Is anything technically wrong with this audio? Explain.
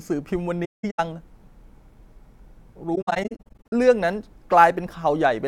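Yes. This speech has two bursts of AAC frame loss with muting, from 0.65 to 1.00 s and from 2.95 to 3.73 s. The decoder zeroed the spectrum of the missing frames. Overlapping windows fade each gap out and back in, so the holes have soft edges. The first burst drops about 277 ms, with one run near 200 ms. The second drops about 427 ms in short gaps, the longest around 70 ms.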